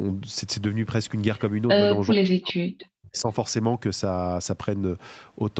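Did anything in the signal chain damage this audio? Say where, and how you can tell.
Yes. Call processing: from 2.14 to 3.29 s the speech collapses by roughly 40 dB, a hole in the waveform and spectrogram. This is speech suppressed in double talk, likely from an echo canceller ducking both sides.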